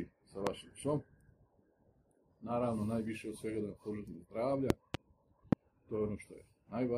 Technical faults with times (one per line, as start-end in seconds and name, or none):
0.47-0.49 loud pop
4.70-4.97 loud pop
5.53-5.55 loud pop